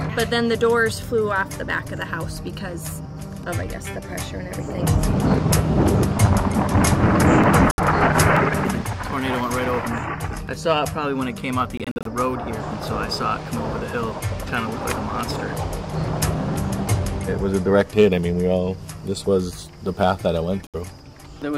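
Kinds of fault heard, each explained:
Bluetooth dropout: audio packets likely missed their delivery deadline, so output went silent until good data arrived, then resumed as if it had played on. Gaps of 70 ms fall at 7.71 s and 20.67 s; at 11.77 s, holes totalling 140 ms scatter over 0.28 s.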